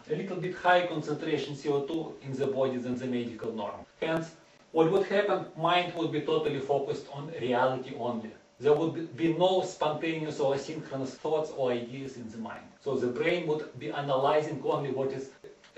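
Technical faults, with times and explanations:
No technical faults can be heard anywhere in the audio, and the signal stays continuous from its opening moment to its close.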